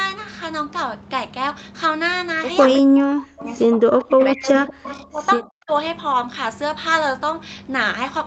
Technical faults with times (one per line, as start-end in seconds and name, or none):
2.68-2.73 echo leak
2.82-5.71 speech suppressed in double talk
4.01-5.05 echo leak